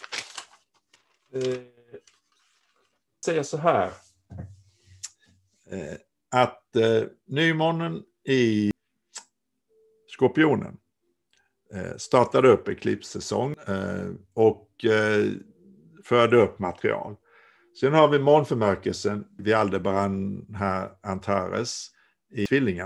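At 3.23, 8.71, 13.54, 19.39 and 22.46 s, damaged data in the compressed stream produces a short glitch heard as a chirp, squawk, click or brief hole. Corrupted bytes cause the decoder to misread the affected frame, lose sync and search for the next valid frame header before decoding resumes.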